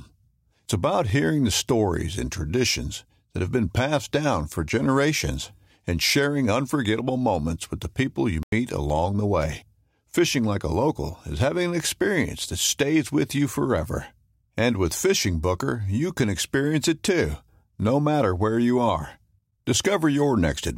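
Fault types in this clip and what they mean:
Corrupt FLAC frame: Damaged bits reached the decoder unchecked, so its prediction ran on wrong values. At 1.10 s, just before "hearing the stories and", this gives a short error peaking at about -27 dBFS. The audio that follows decodes cleanly.
Corrupt frame muted: The decoder rejected damaged compressed frames, and silence replaced them. From 8.35 to 8.52 s the sound drops out abruptly, between "moments with the people" and "along the way". The hole lasts about 0.17 s. Timing stays intact.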